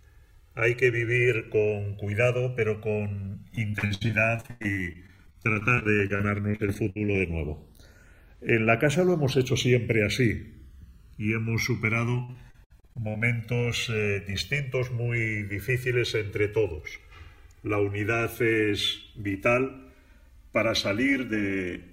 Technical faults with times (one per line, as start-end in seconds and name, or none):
0.00-21.93 channels drifting apart
3.55-7.16 repeated packet loss (robotic sound)
12.24-13.22 repeated packet loss (robotic sound)